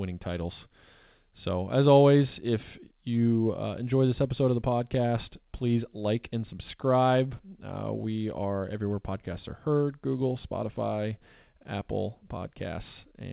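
Nothing in the speech stood out as a fault on listening, with the call path's narrow band topping out around 4 kHz as expected for G.711 mu-law.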